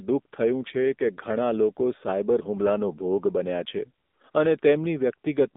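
AMR narrowband mobile codec, throughout the clip: the speech has passed through the 2G/3G mobile voice codec, which samples at 8 kHz and rebuilds the voice from a vocal-tract model excited by a few pulses per subframe. The line passes only about 200 Hz to 3.7 kHz, so the low body and all the air above are gone. The damage is plainly audible: a buzzy, synthetic edge that fits a low mode of about 7.4 kbps.

AMR comfort noise, from 4.06 to 4.20 s, just after "બન્યા છે": for 140 ms the phone treated the talker as silent and sent no speech frames. The receiver filled the gap with smooth generated noise shaped from a rough level and spectrum estimate, so the real background drops out and a flat hiss switches in. Two brief 20 ms repeats follow, from 4.32 to 4.34 s and from 4.60 to 4.62 s. Each is a short swap to the same synthetic fill.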